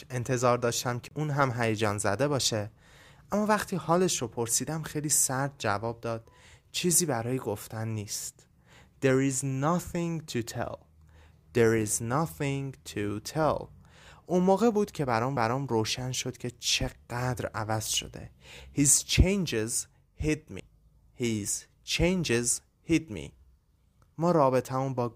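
The player's laser jumped tracks three times, a CD skip each time: a brief mute, roughly 30 ms at 1.08 to 1.11 s, a few milliseconds at 15.37 s, and about 10 ms at 20.6 s, then a tick as the speech resumes elsewhere.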